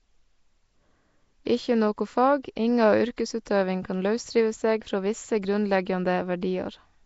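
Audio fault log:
throughout: Nellymoser compression, likely; the speech has a rough hissy halo and smeared underwater feel, with nothing above 7.7 kHz, consistent with around 32 kbps.
3.45 s: pre-echo; an 11 ms hiss creeps in just before "kan lausrive seg frå" because the block's coding noise spills ahead of the sharp onset, softening it.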